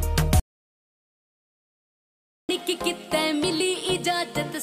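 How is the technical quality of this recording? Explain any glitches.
The recording has one serious glitch. At 0.40 s the sound cuts out abruptly and stays gone until 2.49 s, a gap of about 2.09 s. This is an audio dropout to silence. The gap is silent, with no room tone underneath. That points to the input signal being lost while the recorder kept writing silence. A disconnected device or failed link is the likely cause. Whatever happened during those two seconds is missing.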